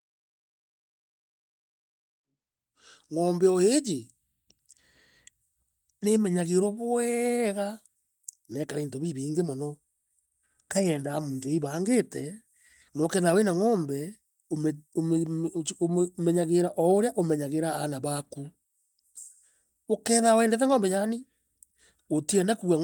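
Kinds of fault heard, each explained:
Nothing stood out on listening to this speech, apart from the level easing up gently over the opening seconds, which is how an editor would bring it in.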